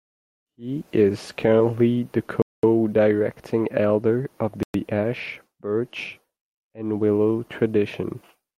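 Bluetooth stall dropouts interrupt this speech clip twice: from 2.42 to 2.63 s, right after "is currently the", and from 4.63 to 4.74 s, after "elder of". Each time the sound cuts to dead silence for about 0.22 s and then 0.11 s before carrying on. The likely cause is radio interference delaying packets so the headphone buffer empties and playback halts until the retransmitted audio arrives.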